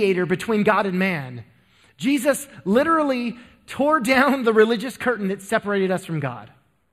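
From start to finish the speech has a channel delay, giving comb filtering. One side arrives a fraction of a millisecond late, which fits a lag of just a few samples, so summing to mono cancels a band up around 5 kHz, leaving the top end hollow and phasey.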